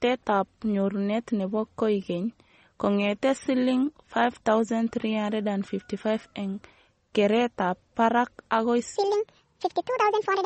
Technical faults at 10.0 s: MP3 compression; section at the wrong speed

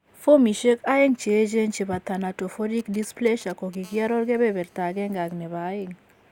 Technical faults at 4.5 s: GSM phone buzz

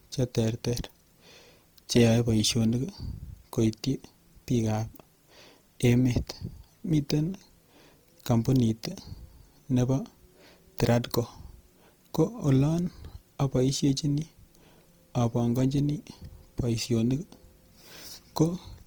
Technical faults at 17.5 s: Opus compression

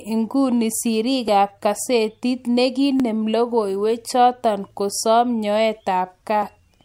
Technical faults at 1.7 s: clock drift buffer slips

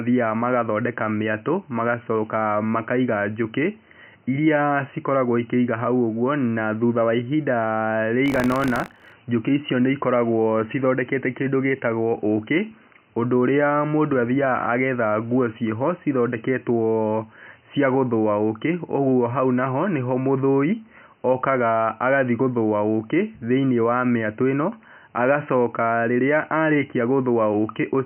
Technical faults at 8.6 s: buffer tearing

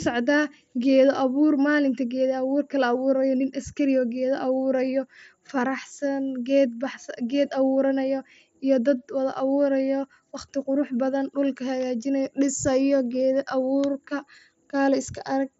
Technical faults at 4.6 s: none

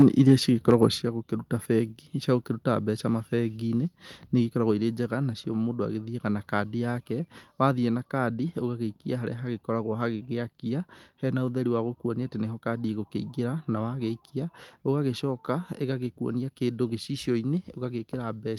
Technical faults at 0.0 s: microphone overload; microphone volume stepped down

